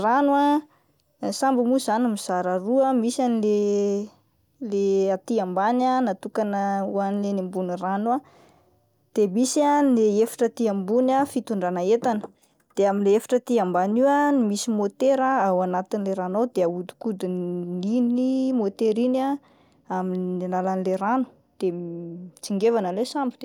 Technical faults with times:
none

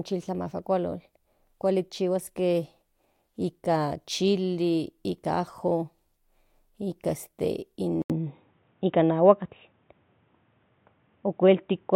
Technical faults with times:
8.02-11.95 input switched to a poorer device

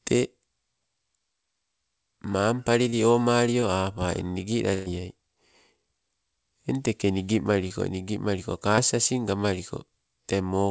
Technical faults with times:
2.90-2.94 short concealed packet loss
3.60-3.64 short concealed packet loss
4.74-4.88 burst of packet loss
7.68-7.72 short concealed packet loss
8.76-8.79 short concealed packet loss

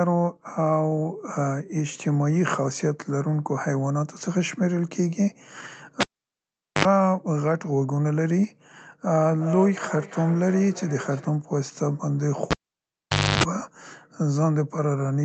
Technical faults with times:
6.00-6.85 cable pulled and plugged in
9.12-11.46 feedback echo between two devices
12.51-13.43 cable pulled and plugged in

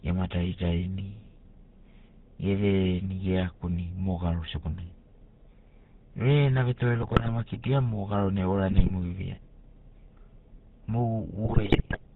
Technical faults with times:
0.00-12.16 GSM full-rate codec
7.02-7.29 GSM bit errors
8.70-8.91 GSM bit errors
11.44-11.99 GSM bit errors

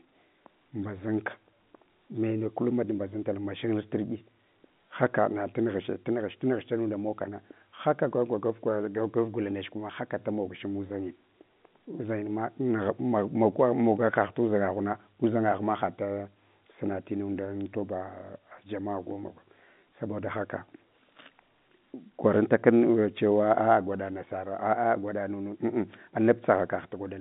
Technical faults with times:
none

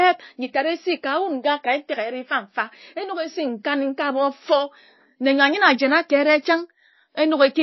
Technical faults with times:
0.00-7.63 MP3 compression

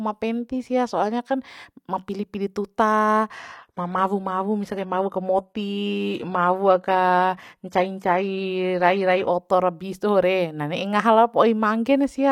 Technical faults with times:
3.31-9.31 adaptive stream at a lower bitrate

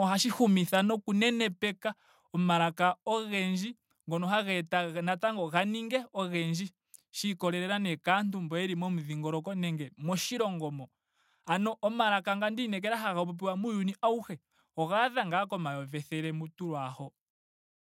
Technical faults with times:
1.02 microphone volume stepped down
3.06 microphone volume stepped down

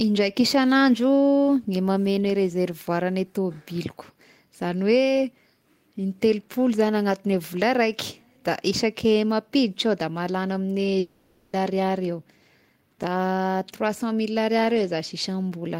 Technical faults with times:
10.99-11.56 long network dropout

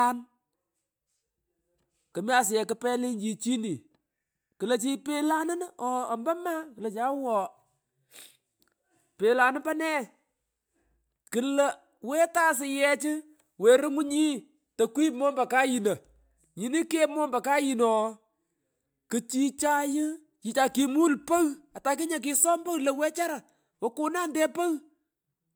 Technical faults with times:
none

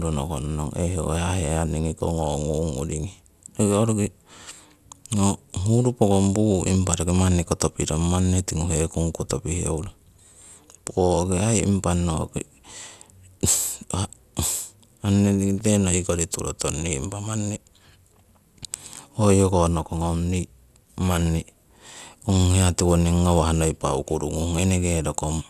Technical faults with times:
15.58-15.66 loose connector crackle

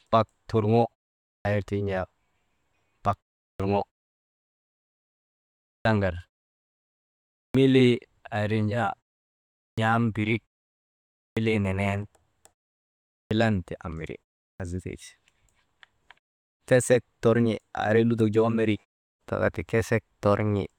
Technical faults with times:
1.38-1.45 clipped start after a pause
3.52-3.60 clipped start after a pause
5.78-5.85 clipped start after a pause
7.47-7.54 clipped start after a pause
9.70-9.78 clipped start after a pause
11.29-11.37 clipped start after a pause
13.23-13.31 clipped start after a pause
14.52-14.60 clipped start after a pause

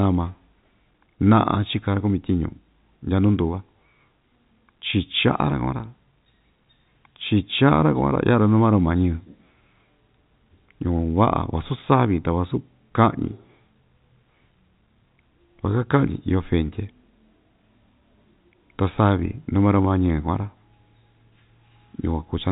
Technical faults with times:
none

